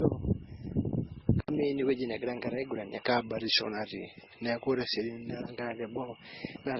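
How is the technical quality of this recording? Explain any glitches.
Quality is compromised by three faults, one lasting the whole clip and two starting partway through.

Throughout the 6.8 seconds, the speech was likely passed through two lossy codecs in turn (transcoding between lossy codecs), with the pattern pointing to low-rate MP3 followed by Opus. Each stage's artefacts stack on the last, so the different artefacts are heard together, and nothing survives above 13.1 kHz.

From 1.40 s to the end, the system likely switched its input to a poorer device. An 80 ms gap marks the switch. Afterwards the band stops at 5.7 kHz, so the speech turns dull and boxy, and a new noise floor sits roughly 35 dB down. The level stays about the same.

From 3.07 s to 5.30 s, a clock-matching routine took a drift correction step, likely slowing playback by 6% in one jump. Pitch drops 107 cents, just over a semitone, so the speech sounds detuned and dragged until it snaps back.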